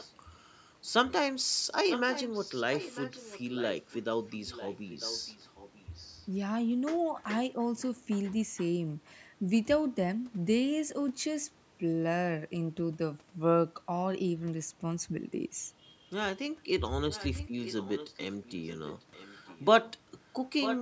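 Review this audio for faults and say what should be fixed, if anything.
Echo leak appears at 0.0–0.12, 1.89–6.27, 8.25–8.34, 9.05–9.11, 17.1–19.91 and 20.6–20.79 s: a copy of the speech returning about 0.95 s late, faint in the short scraps and near full level at the end. The likely cause is a far-end loudspeaker whose echo canceller let its microphone pickup pass back. To prevent it, the far end should use a headset or fix its echo cancellation.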